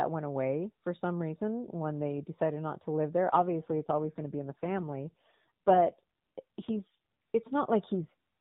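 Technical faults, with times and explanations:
3.28 to 6.96 s, AMR rate drop: right after "not to live there" the speech turns rougher, buzzier and more synthetic, with no gap or narrowing of the band. The mobile codec dropped to a lower rate, fitting 12.2 to 5.9 kbps, to spend bits on error protection.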